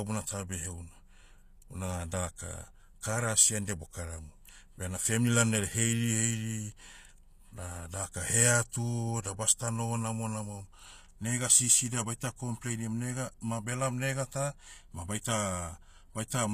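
Speech, and the damage is plainly audible throughout. The s sounds come out gritty and lispy, with a metallic sheen on the upper frequencies, and nothing is present above 14.9 kHz. The likely cause is HE-AAC compression at a low bitrate, around 24 kbps. This codec encodes only the lower spectrum and synthesises the treble by copying lower bands upward, so the rebuilt highs are not the original and their harmonics don't line up with the real ones.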